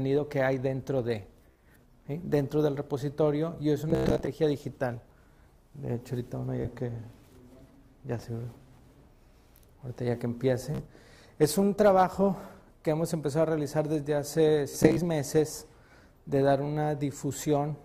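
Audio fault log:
1.51–1.62 s, 3.90–4.29 s, 6.62–6.66 s, 10.75–10.82 s, 14.69–15.00 s: Bluetooth stutter. Late or lost packets make the receiver replay short slices, giving brief machine-gun buzzes. The 3.9 s and 14.7 s bursts are scattered and longest. After each burst the sound skips ahead, as if it had kept playing.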